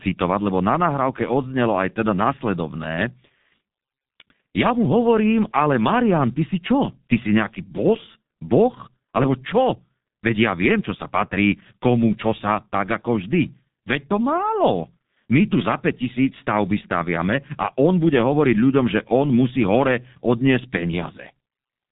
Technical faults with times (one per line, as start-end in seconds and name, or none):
0.00-21.92 G.723.1 codec